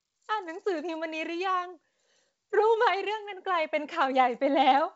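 Nothing in this speech stands out as a fault, and the G.722 wideband telephone coding at 64 kbit/s leaves at most a faint trace of itself.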